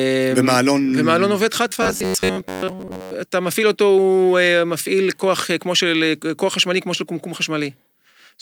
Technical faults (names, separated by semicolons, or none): robotic sound from repeated short buffers